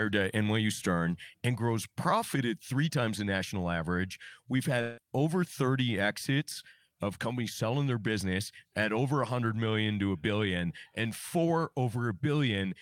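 It's a speech clip with one glitch, a long network dropout, from about 4.81 to 5.00 s. The speech breaks off there and you hear the last sound smeared out into a buzzing or hissing tail that fades over roughly 160 ms, with no true silence in between. When the speech picks up again around 5.00 s, about 160 ms of it is simply gone. The likely cause is a stretch of packets that never arrived, with the receiver concealing the gap by extending what it last had.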